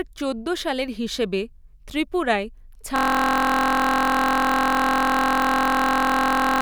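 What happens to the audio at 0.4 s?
Nothing goes wrong at 0.4 s; the speech carries on intact through that moment.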